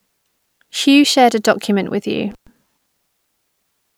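A speech recording with one intermittent contact fault: between 2.31 and 2.47 s the signal cuts out for about 117 ms, as a loose plug or cable briefly loses connection and then reseats. What separates it from a clean digital dropout or packet loss is the analogue signature: crackle marks both edges of the break, and faint hiss remains while the line is open, rather than dead silence or a smoothed-over concealment.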